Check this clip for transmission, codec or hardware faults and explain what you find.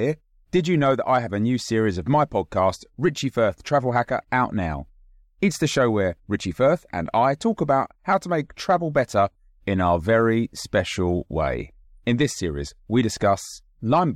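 One hardware fault runs through the whole speech recording: sample clock jitter. A faint hiss and roughness ride on the louder, brighter sounds and disappear in pauses. The converter's clock wavers by roughly a microsecond or two, so steep waveform slopes are sampled at slightly wrong moments, leaving error about 45 dB below the signal.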